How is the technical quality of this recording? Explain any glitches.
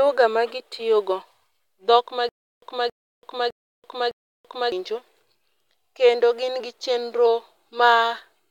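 There's one glitch, a stutter with silent gaps from 2.29 to 4.72 s, right after "dhok ma". A 275 ms burst repeats four times, each followed by 333 ms of dead silence, likely a stalled stream replaying its last fragment and losing the audio in between.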